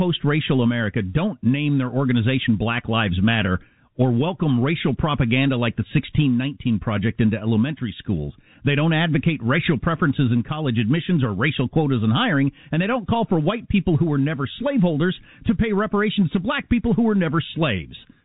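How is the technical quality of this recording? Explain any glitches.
No glitches can be heard anywhere in the recording. It carries the narrow sound of G.711 telephone coding, with nothing above about 3.8 kHz and no more than faint coding noise riding beneath the speech.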